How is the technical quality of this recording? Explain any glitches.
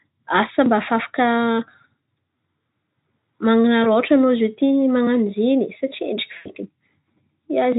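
Two short dropouts from VoIP packet loss concealed by the speech codec, at 3.83 to 3.88 s and a longer one at 6.37 to 6.51 s. The decoder patched lost packets (roughly 20 ms, then 80 ms) by extrapolating the last sound, which gives a brief buzzy or noisy, fading smear.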